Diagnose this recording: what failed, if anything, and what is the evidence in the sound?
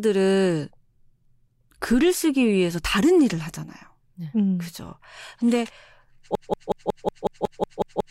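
Broken-record loop from 6.35 s to the end: a 0.18 s fragment repeats ten times, likely a stalled playback buffer resending its last fragment.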